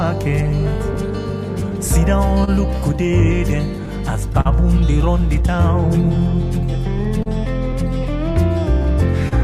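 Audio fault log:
throughout: clock drift between sender and receiver. The sending clock runs roughly 3 percent slow against the receiver's, so the jitter buffer keeps draining. The receiver compensates with repeated stretches and occasional brief holds, which show up as small timing hiccups recurring unevenly across the clip.
0.51–2.49 s: scattered short gaps. About four packets arrived late or not at all, the longest covering roughly 30 ms, with around 70 ms concealed in total. Each hole was bridged by extending the preceding sound, so nothing is lost, but brief ticks or slight smears appear.
0.75–8.33 s: repeated timing corrections. The receiver keeps inserting short repeated pieces, running playback at 99 percent speed and adding roughly 70 ms overall to keep pace with the slow sender. The edits all go the same way but are unevenly spaced, heard, if at all, as faint hiccups or unsteady tempo.
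4.41–4.47 s, 7.23–7.28 s, 9.28–9.33 s: short stall from a late packet. Each time a packet missed its playout slot, the buffer emptied and the last sound was held for 44 ms, 31 ms and 28 ms respectively. Nothing is skipped, but a sustained moment with a faint buzz or dip results.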